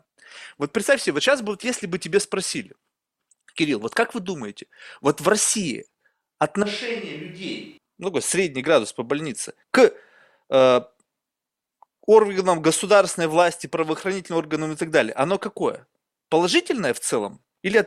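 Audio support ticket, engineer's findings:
Speech turns abruptly roomy and hollow, thinner low end, level down about 10 dB, background noise more audible, 6.63 to 7.77 s; snaps back just as suddenly. Likely switch to a distant microphone: close-mic feed dropped, more distant pickup covering the gap.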